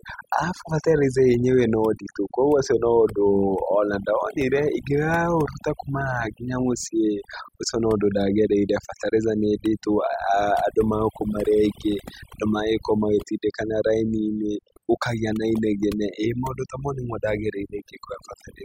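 A speech recording with overdone noise removal throughout: an over-aggressive noise reduction stage pulls frequency bands near its noise estimate right down, leaving near-silent gaps with twinkling specks.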